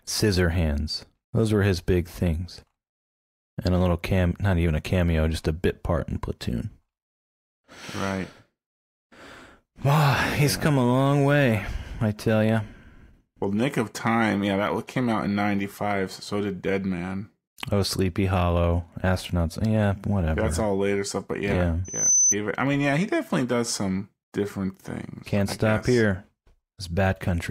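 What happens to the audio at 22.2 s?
At 22.2 s a loudspeaker feedback squeal is sounding. It runs from 21.84 to 22.35 s, just after "later stuff but yeah". The microphone re-amplifies its own loudspeaker, so a single 6.1 kHz tone swells over roughly a third of a second to about 5 dB above the speech. That gradual build, rather than a steady constant whine, marks it as feedback.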